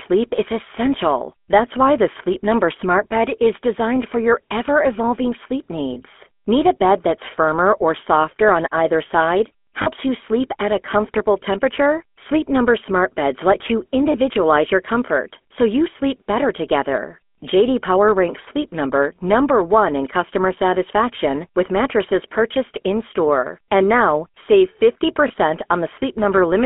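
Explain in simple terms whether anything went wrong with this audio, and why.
Yes, a couple of things went wrong, and both come from the speech having passed through an old mobile phone link.

The whole clip carries the sound of the GSM full-rate codec, the original digital phone codec. It rebuilds the voice from a rough model of the throat and mouth driven by a coarse pulse pattern, so the speech comes out buzzy and gravelly. The line only passes roughly 250 Hz to 3.4 kHz, which takes away the deep body and the crisp top end, leaving that thin, boxy phone-call tone.

There are also four short lost GSM frames, moments where bits of the signal never arrived and the codec patched them by replaying the last good chunk. You hear a brief rough, metallic ring in place of the real sound. The first is at 5.94 s, right after "your ever evolving sleep". The second, at 9.82 to 9.88 s, is two frames long. 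The third is at 14.12 s, between "let you" and "your comfort so you", and the last is at 25.28 s, just after "now save".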